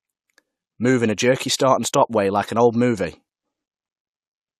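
At 1.56 to 1.60 s, between "in a jerky" and "way like an old", pre-echo appears: the transform block's quantisation noise spills about 34 ms ahead of a sharp onset. It sounds like a short hiss before a softened attack, and on a spectrogram it shows as a broadband smear preceding the transient.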